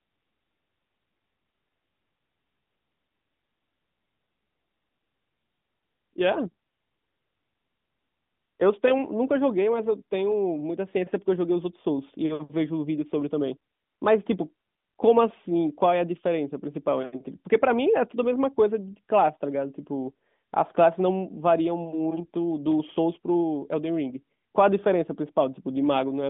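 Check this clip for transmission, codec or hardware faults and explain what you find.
No transmission, codec or hardware faults turn up in this speech recording; it carries the ordinary narrowband sound of an AMR-NB mobile call at what sounds like the 12.2 kbps mode, confined to a line band of roughly 150 Hz to 3.6 kHz with nothing above about 3.7 kHz.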